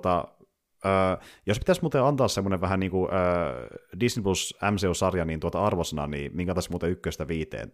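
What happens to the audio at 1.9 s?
Nothing goes wrong at 1.9 s; the speech there is intact, with no dropout, click or glitch at that point.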